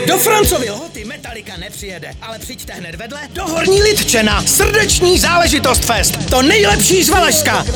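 From 0.46 to 0.84 s the level falls by roughly 15 dB under a rapid ticking, and from 3.25 to 3.72 s it rises by about as much with a slower tick. This is zipper noise: the gain changes in unsmoothed 3 dB jumps, each leaving a small click.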